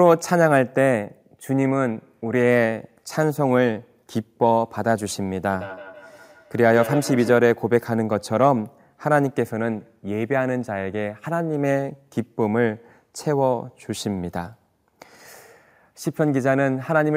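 Feedback echo between two devices, 5.53 to 7.43 s: a second device in the room replays this microphone's speech, which gets picked up again, returning about every 150 ms at about -10 dB.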